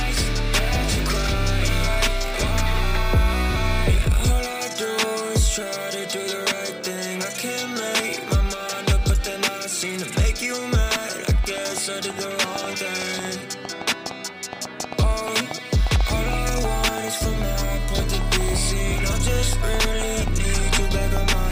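From 11.44 to 21.18 s a train of clicks, about 4.6 per second at uneven spacing, pops a few dB above the sound, likely interference; similar repeating pulses distinguish it from random crackle.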